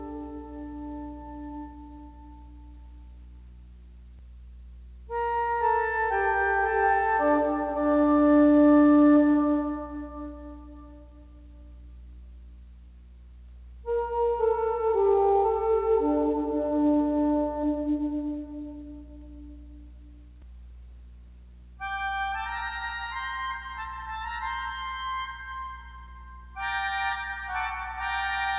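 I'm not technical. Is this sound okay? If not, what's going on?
Yes, the sound is fine: it came through an ordinary phone-style call connection that carries nothing above about 4 kHz, which gives it the narrow, telephone-like quality you'd expect from a normal call.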